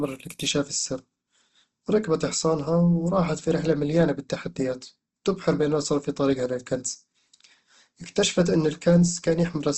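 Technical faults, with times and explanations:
Throughout, Opus compression: the speech sounds grainy and rough, with a noisy texture on voiced sounds, and nothing is present above 12 kHz. The likely cause is Opus encoding at a low rate, which fits roughly 16 kbps in its music mode, where starved bands are refilled with folded or noise content. A spectrogram shows a hard ceiling at 12 kHz with speckled, smeared harmonics rather than clean striations.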